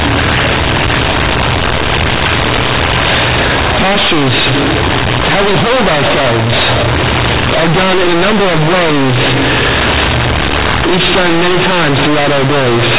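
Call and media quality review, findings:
Companded audio read as linear, throughout the speech. Symptom: very loud, buzzy distortion, heavy noise in pauses. Probable component: decoder or playback path. A-law G.711 bytes played as raw 8-bit samples without expansion. Quiet passages swing near half-scale.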